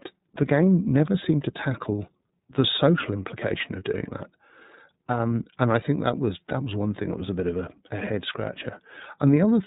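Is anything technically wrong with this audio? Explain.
Yes. The whole clip has gone through the iLBC codec, a narrowband VoIP coder. Everything above 4 kHz is gone, and the speech has a plainly rough, slightly synthetic edge. That fits 30 ms frames coded independently, at around 13 kbps.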